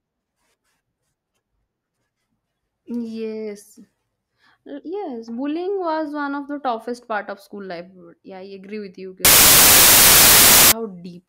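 From 9.25 to 10.72 s, samples built from the wrong bytes: misassembled bytes promote the noisy low bits, so the speech is buried under loud, harsh broadband noise.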